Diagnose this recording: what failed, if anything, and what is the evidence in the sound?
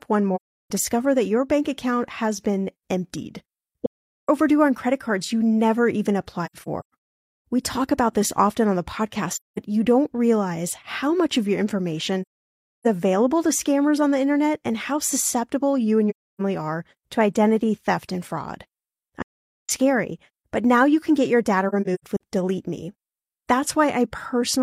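The codec stage dropped data: AAC frame loss with muting, as soft-edged silent gaps at 0.35, 3.86, 6.45, 9.33, 12.22, 16.10, 19.22 and 21.69 s, the one at 6.45 s broken up. The decoder zeroes missing spectra; overlapping windows fade the edges.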